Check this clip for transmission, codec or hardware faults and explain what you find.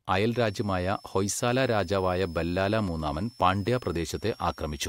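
A switching supply whistle runs under the speech from 0.33 s to the end. A nearby switching power supply is cycling at an audible rate, either in burst mode or beating against another converter, and its tone leaks into the audio. It sounds like a thin, high whistle, about 30 dB below the speech, drifting between roughly 5.2 and 5.6 kHz. On a spectrogram it shows as a narrow, wavering horizontal line in that band. The waveform barely shows it.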